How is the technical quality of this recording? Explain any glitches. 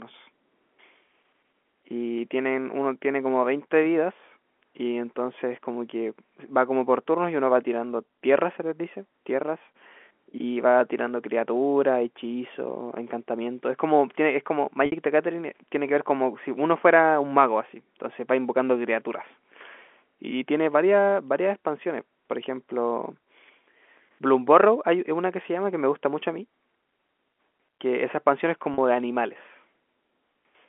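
Two brief glitches of packet loss with pitch repetition interrupt the speech, which is carried over a narrow telephone band of roughly 250 Hz to 3.4 kHz, consistent with G.711 coding.

From 14.86 to 14.92 s (60 ms, consistent with three 20 ms packets) and from 28.74 to 28.78 s (40 ms, about two packets), the stream's data went missing. The receiver filled each gap by looping the last pitch period, so the sound briefly holds on a slightly buzzy, sustained tone instead of moving on. This sets it apart from a plain dropout, which would leave a silent hole or a click.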